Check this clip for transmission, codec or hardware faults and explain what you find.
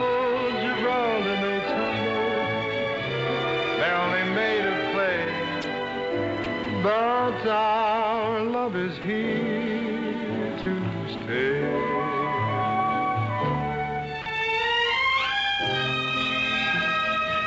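Brief dropouts, where the sound is replaced by steady noise, occur at 5.62, 6.44, 6.64, 9.02 and 11.18 s (20 ms each), and from 10.62 to 10.66 s and 14.22 to 14.26 s (40 ms each). This is likely sound dropped by the voice detector: the sender judged these moments to be background and stopped transmitting, and the receiver filled the gaps with comfort noise until the detector triggered again. The audio has nothing above 8 kHz, which fits the G.722 call codec at 64 kbps used on the WebRTC call path.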